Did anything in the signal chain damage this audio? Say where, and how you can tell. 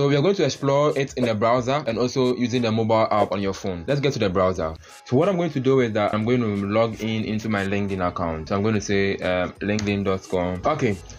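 No, no stage of the chain has audibly damaged it.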